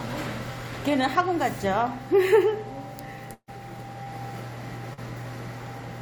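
At 3.33 s the sound freezes into a held sound that fades for about 140 ms and drops to near silence for roughly the last 50 ms before picking up again at 3.50 s, with a stretch of the original audio simply gone. This is a burst of packet loss: a run of packets covering about 140 ms never arrived in time, so the receiver stretched the last received sound, attenuating it as the gap lengthened, and then jumped ahead.

Two briefer disturbances follow, each a short smear or wobble. The first is at 4.04 s and lasts about 20 ms. The second runs from 4.93 to 4.99 s, about 40 ms. Both are short concealed packet loss. That much audio failed to reach the decoder, so the receiver synthesised a continuation of the preceding sound and then crossfaded back into the real signal.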